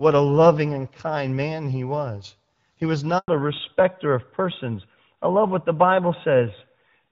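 At 3.18 s the speech cuts out. The silence lasts 100 ms, until 3.28 s. This is a handover gap. The call was passed from one network link to another, and no speech frames came through during the switch. The sound fades within a few tens of milliseconds rather than stopping with a click. Then there is dead air. Whatever was said in that tenth of a second is gone.

From 3.28 s to the end, the audio changes character. This is a fallback to narrowband. Before the gap, the speech has the wider, airier sound of AMR wideband (HD Voice) coding, which points to a rate around 12.65 kbit/s, with only light coding roughness. After the gap, nothing above 4 kHz remains. The sound matches AMR narrowband at about 12.2 kbit/s. Sibilants lose their crispness, and the speech turns duller and rougher.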